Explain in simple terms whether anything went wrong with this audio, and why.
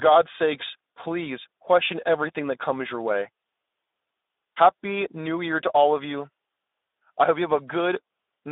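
Something did go wrong, and it lasts the whole clip, from start to finish. The speech has passed through the Speex codec, an older speech compressor used in internet calls and game chat. To save data it rebuilds the voice from a simplified model rather than keeping the real waveform, and here that rebuilding is plainly audible. The sound is also squeezed into a telephone-like band of roughly 300 Hz to 3.7 kHz, so the deep bass and the crisp highs are gone.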